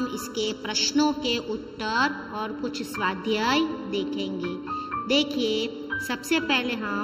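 From start to finish the sound carries channel delay (comb filtering): one channel arrives about 0.7 ms behind the other, and when the two are summed to mono their shared content cancels at evenly spaced frequencies, starting near 700 Hz and repeating at regular steps above. The result is a hollow, phasey colour. Unlike a flanger, the notches never sweep, and unlike simple low-pass dullness, the treble returns between the gaps.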